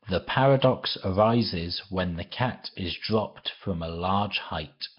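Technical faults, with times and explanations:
Throughout, Nellymoser compression: a hissy, smeared underwater halo with nothing above 5.3 kHz. Noise-filled empty bands, not a clean low-pass, likely point to Nellymoser at about 22 kbps.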